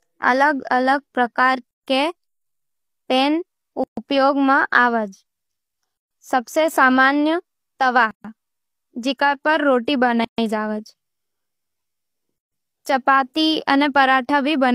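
Gaps at joins of encoded pieces open in the speech at 1.71, 3.84, 5.97, 8.11, 10.25 and 12.38 s. Each lasts 129 to 136 ms and has smeared edges. The 2 s pieces were encoded separately and joined untrimmed, keeping each encoder's start-up delay and final-frame padding.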